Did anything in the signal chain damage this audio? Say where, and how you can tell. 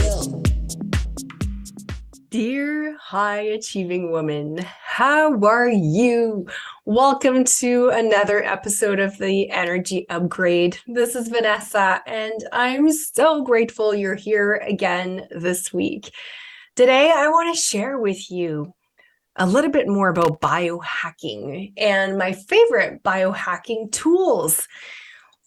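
Yes. Loose connector crackle appears at 11.56 to 11.68 s and again at 20.15 to 20.49 s, placing the damage in the analogue wiring. Each event is a short, irregular burst of scratchy crackle, the second lasting about a third of a second. A worn or dirty contact moving in its socket repeatedly opens and closes the circuit, chopping the signal on and off, and any DC on the line turns each break into a pop.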